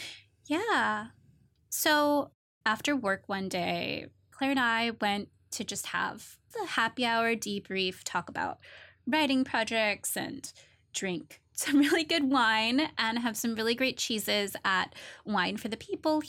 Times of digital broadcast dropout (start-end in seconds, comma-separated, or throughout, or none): none